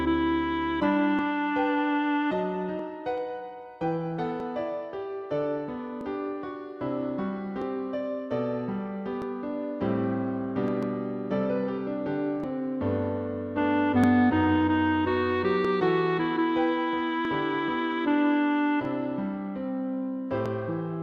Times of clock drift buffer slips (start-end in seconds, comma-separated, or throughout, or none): 1.19-20.46